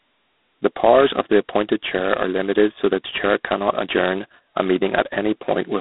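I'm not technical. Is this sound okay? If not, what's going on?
No, the speech sounds thin and phone-like throughout, with a harsh rasping hiss that swells with the talking, typical of heavily squeezed G.726 ADPCM phone coding.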